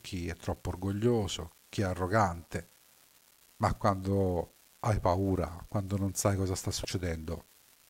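From the first moment to the end, the speech carries an unreliable data bit. One line in the digital path is marginal. In a random share of samples its bit comes out wrong. Each wrong bit adds a spike of the same fixed size. Together the spikes form a steady crackle or fizz. It does not follow the speech. It goes on through the pauses as well.

From 6.82 to 6.85 s, just after "non sai cosa sta", there is damaged data in a compressed stream. Part of the encoded data there is wrong. The decoder misreads or rejects those frames. It loses its place and looks for the next valid frame header. The result is a short chirp, squawk, click or short hole, about 30 ms long, cutting across the speech. Then normal decoding resumes.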